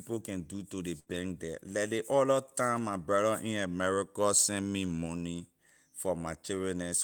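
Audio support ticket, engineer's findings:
Burst of packet loss, 0.99–1.08 s, after "can do to ley". About 68 ms of concealment: the receiver extends the last sound and fades it, giving a held buzz or fading hiss instead of real signal. Playback then resumes ahead, with roughly 60 ms of original audio skipped before "there leh ley other". Probable component: network path or jitter buffer, with consecutive packets dropped or arriving too late for playout.

Lost packet rebuilt from error correction, 1.08–1.14 s, right after the burst and before "there leh ley other". Roughly 40 ms, which fits two 20 ms frames recovered from redundant low-bitrate copies (Opus in-band FEC) carried in the following packets. No gap, but a rougher, noisier texture. Again at 5.06–5.08 s after "in america sent me": a single 20 ms rebuilt frame with the same brief coarsening. Component: same lossy path, with the decoder's FEC masking the drops.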